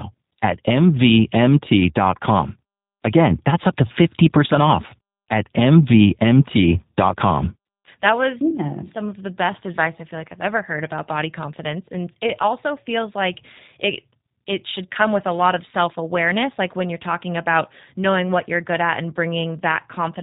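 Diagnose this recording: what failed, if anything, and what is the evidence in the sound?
The codec stage is the culprit: the whole speech track carries G.729 coding, band-limited below 4 kHz with a rough, synthetic edge that fits a low-rate 8 kbit/s stream.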